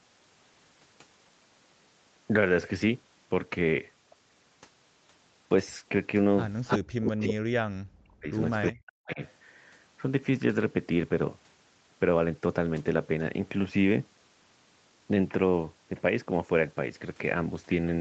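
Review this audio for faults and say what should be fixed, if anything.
Echo leak at 6.65 to 6.77 s, 8.66 to 8.71 s and 9.24 to 9.34 s. A copy of the speech returns 317 ms late. It is first only about 5 dB down, then much fainter. The likely cause is an echo canceller at a loudspeaker end leaving its own pickup in the signal.

Speech suppressed in double talk from 6.77 to 8.33 s and 8.71 to 9.2 s. The speech dips by up to about 40 dB. This is likely the canceller turning down both talkers while they overlap.

A headset or better-tuned echo cancellation at the loudspeaker end would prevent both faults.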